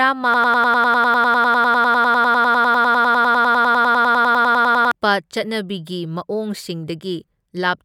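Speech clip with a broken-record loop: from 0.34 to 4.91 s, a 100 ms fragment repeats 46 times, likely a stalled player or stream, and the speech it replaced is gone.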